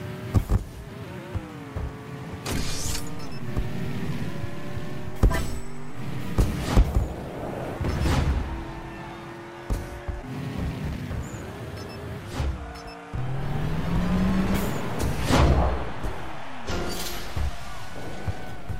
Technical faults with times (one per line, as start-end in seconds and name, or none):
13.18-18.80 DC step